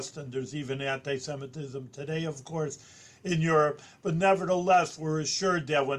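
Timecode bleed runs from 2.22 to 5.19 s. Linear timecode at 24 frames per second leaks in around 1 and 2 kHz, a faint chirping warble far beneath the sound.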